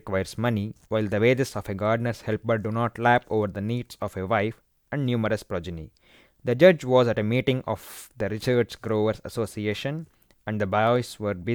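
A likely case of dropped samples, losing only a tiny fraction of a millisecond each time, makes the speech waveform jump, giving sharp single clicks at 6.51, 8.54 and 10.87 s.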